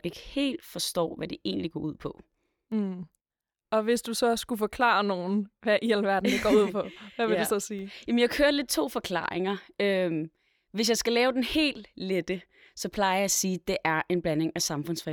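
Two bit error spikes, at 2.72 s and 7.24 s: a flipped bit jolts one or two samples to about -37 dBFS, giving a brief broadband tick unrelated to the speech.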